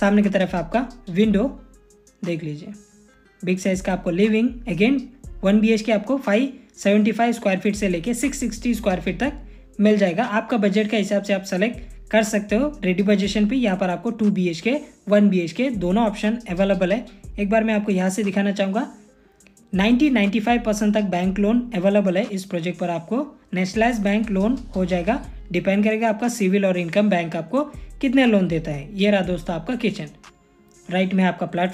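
Nothing in the audio registers as a technical fault at any point.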